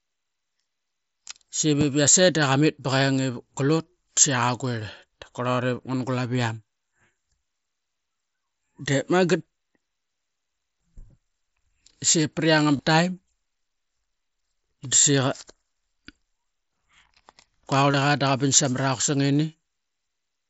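Speech over a Bluetooth headset link, and there's concealed Bluetooth headset packet loss in three spots. At 4.73 s a single 7.5 ms gap is patched almost invisibly. At 12.77 s and 17.91 s longer runs of about 22.5 ms get filled by repeating recent waveform, giving a brief buzzy hold and a small warble as real audio returns, which fits three lost frames each.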